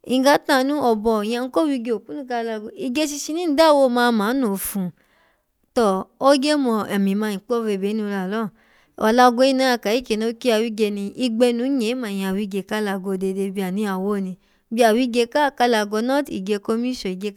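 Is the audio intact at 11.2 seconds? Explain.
Yes, the speech at 11.2 seconds comes through intact, with no dropout, click, distortion or other fault at that moment.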